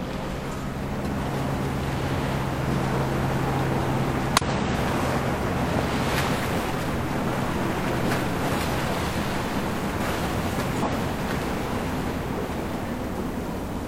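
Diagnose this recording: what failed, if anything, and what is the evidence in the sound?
Damaged data in a compressed stream broke codec decoding, leaving brief glitches at 0.89–0.94, 4.37–4.42, 6.32–6.38 and 10.82–10.88 s as the decoder lost frame sync.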